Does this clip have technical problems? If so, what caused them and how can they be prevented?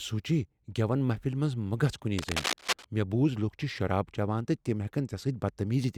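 Yes: from 2.18 to 2.85 s, between "منز مہ گژھ کنی" and "مےٚ بوٗز لوکھ چھ", there's cable scratch noise, rough rustly bursts nearly as loud as the speech, likely a worn cable or connector shifting. Swap out suspect leads and keep cables still while recording.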